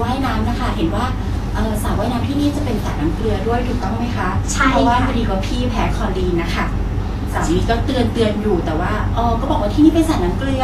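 Throughout, nothing reaches above 14.2 kHz and the treble turns hissy and grainy, likely Vorbis compression; the grain, not mere dullness, separates it from filtering.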